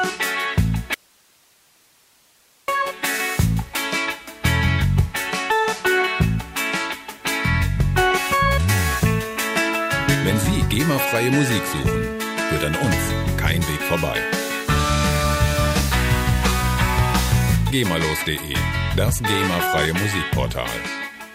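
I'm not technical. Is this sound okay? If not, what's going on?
No. From 0.94 to 2.68 seconds there is an audio dropout to a faint residue: the sound suddenly vanishes for about 1.7 seconds, leaving only a quiet hiss, then snaps back mid-flow. It isn't a natural pause or a fade, because the cut is abrupt at both ends. The likely cause is that the signal was briefly lost somewhere upstream while the rest of the recording chain stayed switched on, so all it picked up in the gap was its own background hiss.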